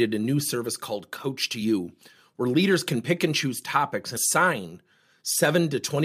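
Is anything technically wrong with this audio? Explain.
Yes. At 4.16 s, after "pick and choose topics", compressed frames are skipped. About five 23.2 ms frames go missing, so the speech jumps ahead roughly a tenth of a second.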